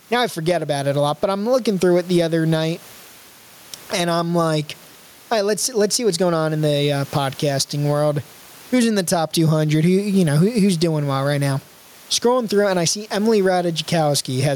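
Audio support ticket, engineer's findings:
Gain pumping throughout the speech. Room noise, about 36 dB below speech. Level swing of around 15 dB. Likely input gain set too high, with a fast limiter clamping each peak. Dynamics squashed.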